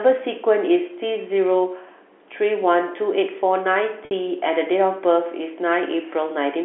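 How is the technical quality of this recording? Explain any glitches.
There's one glitch, a packet loss with pitch repetition, heard over the telephone-band sound of G.711 coding. At 4.05 to 4.11 s, about 60 ms went missing (consistent with roughly six 10 ms packets), and the receiver looped the last pitch period, giving a brief held, buzzy smear.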